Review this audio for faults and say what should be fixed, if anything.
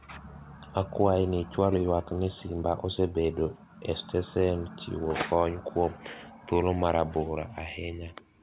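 Nothing here needs fixing; no faults were found.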